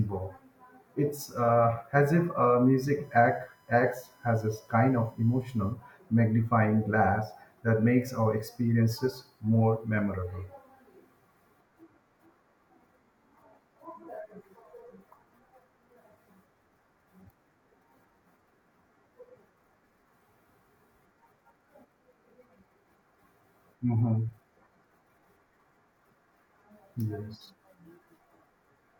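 From 3.04 to 5.73 s the speech carries USB whine, a steady 1 kHz tone from the bus's 1 ms frames leaking through power or ground. It sits about 40 dB down and shows as a thin horizontal spectrogram line.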